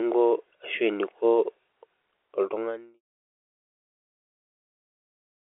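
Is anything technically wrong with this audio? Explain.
No, nothing is technically wrong with this speech.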